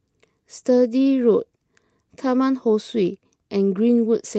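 No technical faults are audible.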